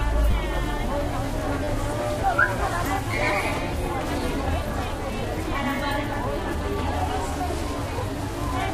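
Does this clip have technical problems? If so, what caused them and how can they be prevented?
Yes. Three repeated buffer faults occur, at 0.31–0.33 s, 1.64–1.67 s and 3.11–3.13 s. Each is a brief buzzy stutter where one tiny slice of sound plays again two or three extra times, with a hard join at each repeat. The repeat spacing fits a 10 ms buffer that the device replayed because fresh audio arrived late. Unlike a dropout, nothing goes silent and the sound resumes without a gap. Unlike a single click, the repeats give the stutter a rapid, periodic buzz. Prevent it by giving the audio thread higher priority or a larger buffer so new data always arrives before the device needs it.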